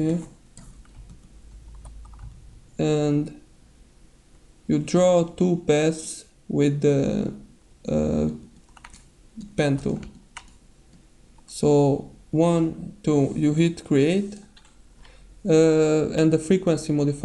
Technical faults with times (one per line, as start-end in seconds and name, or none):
7.34 dropped samples
8.86 dropped samples
12.81 dropped samples
16.18 dropped samples